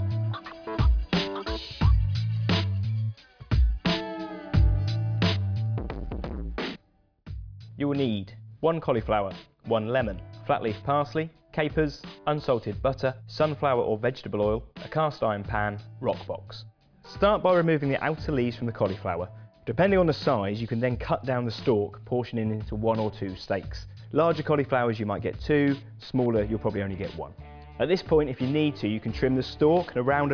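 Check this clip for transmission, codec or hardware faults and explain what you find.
Nothing here points to a transmission, codec or hardware problem.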